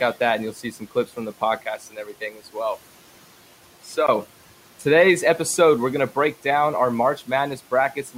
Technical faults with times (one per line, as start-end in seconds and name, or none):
0.54-1.10 speech cut by the noise suppressor
1.64-4.08 input switched to a poorer device
1.80-2.55 speech cut by the noise suppressor